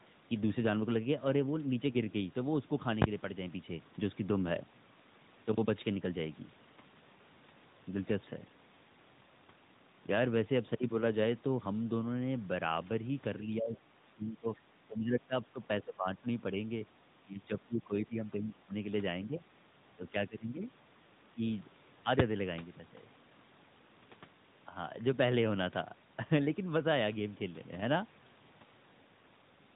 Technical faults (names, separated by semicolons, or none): speech suppressed in double talk